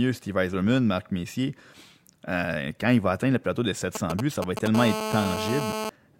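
From 3.95 to 4.68 s, GSM signalling bursts intrude: a nearby 2G phone's intermittent radio bursts, rectified by the audio circuit, give galloping ticks and brief 217 Hz buzzes roughly 5 dB below the speech. From 4.75 to 5.90 s a steady GSM phone buzz follows, with the phone now in a call pulsing continuously at 217 Hz, producing a harsh, harmonic-rich rasp about 4 dB below the speech.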